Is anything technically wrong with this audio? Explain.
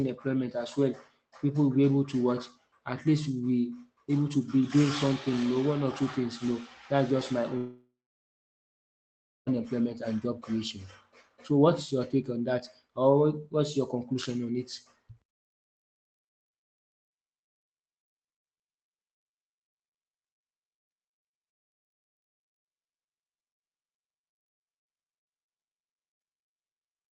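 Yes. There is one clear fault. From 7.57 s to 9.49 s, right after "that's just my", the speech breaks off. The last sound is stretched into a fading buzz for about a third of a second. Then roughly 1.6 s of near silence follows. Speech resumes at "and job creation", and about 1.9 s of it is simply gone. This is likely a long network dropout. No packets arrived, so the receiver padded the gap with concealment and then gave up. The call codec's coding noise is audible throughout, and the top end stops near 8 kHz.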